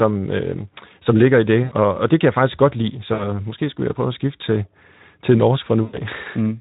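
Buzzy, stretched tones fading into coloured noise follow "øh som ligger i" (1.64–1.73 s), "jeg faktisk godt lide" (3.13–3.40 s) and "at skifte til til" (5.84–6.00 s). This is VoIP packet loss concealed by the speech codec: about 80, 60 and 100 ms went missing, so the decoder extrapolated with falling gain.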